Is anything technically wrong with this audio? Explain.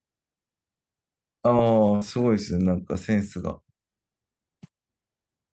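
Yes. There is a burst of packet loss in this speech, from about 1.95 to 2.03 s. Several packets in a row never arrived in time to be played. The receiver filled about 59 ms by extending the last sound and fading it down. So a voiced sound turns into a brief held buzz, or a hiss that dies away. Speech then picks up further on. About 60 ms of the original is simply gone. The Opus call path is audible as a top end that stops near 8 kHz.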